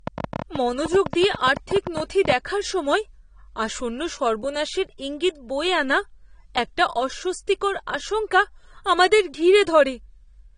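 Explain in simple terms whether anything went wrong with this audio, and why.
Right from 0.07 s to 2.33 s there's a train of clicks, about 30 uneven pops roughly ten a second, fairly loud, ending before "দেখার সময়", likely electrical interference. The whole recording also sounds like low-bitrate audio saved at a high bitrate: nothing above 9.7 kHz, so it's dull, likely squeezed hard once before being saved larger.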